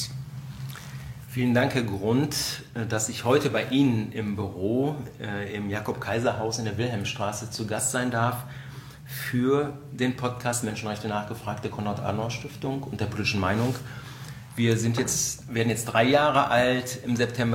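No technical faults can be heard anywhere in the audio. Nothing breaks into the sound at any point across its whole duration.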